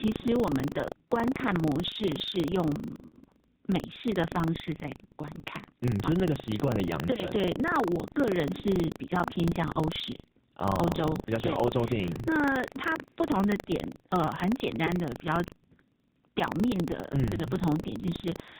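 AMR narrowband mobile codec damage runs through the whole speech recording: nothing above 4 kHz survives, and the heavy buzzy, synthetic quality points to a very low bitrate near 5.9 kbps. Buffer tearing is also present throughout, a steady 25 Hz robotic rattle where a small slice of each buffer, roughly 70 ms stale, is spliced in with hard joins. Lost AMR speech frames at 3.08 to 3.15 s, about 40 ms and consistent with two dropped frames, smear and fade as the decoder repeats old settings. Another dropout at 7.14 to 7.24 s, a brief dip that fits a single 20 ms frame, leaves a weak, rough restart.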